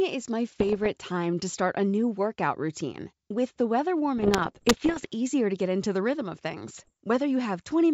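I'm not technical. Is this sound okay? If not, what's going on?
No. There are bit errors on an ADPCM link, heard as pops and rough, crackly bursts with brief jumps in level at 0.52–0.87 s (before "time to start a"), 4.18–5.07 s (after "the weather") and 6.72–6.93 s (after "into the rhythm of"). Corrupted bits throw the decoder off track, so each error rings on briefly.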